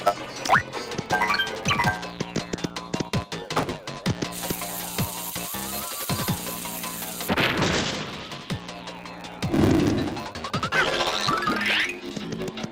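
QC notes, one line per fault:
Throughout: block size mismatch (truncated). Each block loses its tail before the next stage reads it, so the audio plays about 1.07 times fast at near-normal pitch with a 100 Hz buzz, which fits a 512-sample block. A spectrogram shows harmonic lines at 100 Hz multiples; the waveform shows discontinuities every 10 ms.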